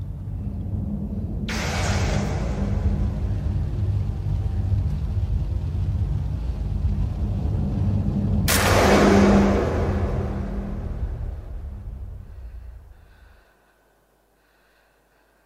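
Nothing stands out here; there are no dropouts, glitches or other technical problems anywhere in the clip.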